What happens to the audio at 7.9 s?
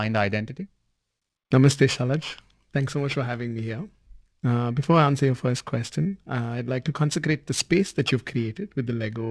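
At 7.9 s the sound carries periodic clock jitter, which runs through the whole clip rather than starting there. Interference at around 2 kHz wobbles the converter's sampling clock, so each component of the speech gains sidebands about 2 kHz above and below it, strongest around the higher harmonics. It sounds rough and metallic on the voice and disappears in pauses. A spectrogram shows mirrored copies of the harmonic pattern offset by roughly 2 kHz, within the wideband telephone band's 7 kHz ceiling.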